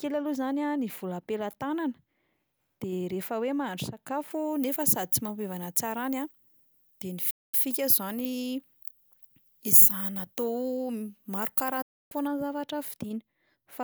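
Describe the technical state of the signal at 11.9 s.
At 11.9 s the audio is silent from a digital broadcast dropout, running 11.82 to 12.13 s. The receiver muted on lost frames. Sound fades out within 8 ms, and about 0.29 s is gone, which fits roughly nine lost frames.

Pre-emphasis is also left on from 4.31 to 12.27 s. An FM 75 µs treble boost was never undone. Around 10 kHz it sits about 13 dB high, so the speech sounds thin, bright and sibilant.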